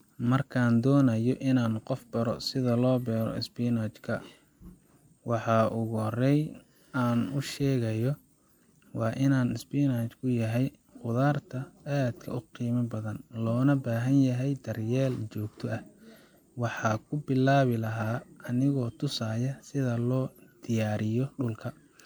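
Speech throughout, and the whole clip carries generation loss: it has that swirly, hollow quality with smeared consonant attacks that a single encode at a decent rate wouldn't give you. The content stops dead at about 19.9 kHz, and the character fits MP3 at around 128 kbit/s, likely re-encoded something like half a dozen times or more. Each pass lands on a shifted frame grid, so the quantisation noise and spectral holes keep stacking.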